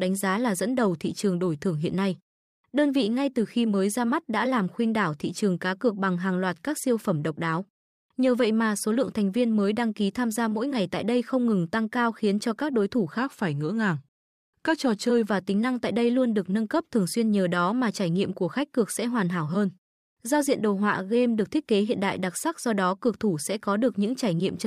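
From 13.18 to 15.30 s, wrong sample rate: 48 kHz audio played at 44.1 kHz runs at 0.919 speed, about 1.5 semitones flat. Spectrogram harmonics shift downward and the waveform stretches.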